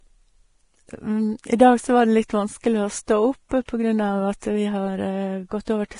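A speech recording, heavily damaged for its whole length by what is likely Vorbis compression. Nothing survives above 10.5 kHz, and the remaining treble has turned into a grainy, hissy wash that roughens sibilants and blurs consonant onsets, which fits a bitrate of roughly 30 kbps. A plain low-pass filter would only dull the sound. Here the upper band is replaced by noise of similar energy.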